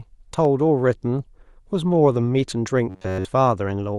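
At 0.45 s a sharp snap cuts across the speech. This electrical switching spike likely came from a nearby switch or discharge arcing into the line. From 2.90 to 3.25 s the voice becomes a rigid, metallic 94 Hz buzz. This robotic sound likely comes from repeated short buffers, about 11 ms looped throughout.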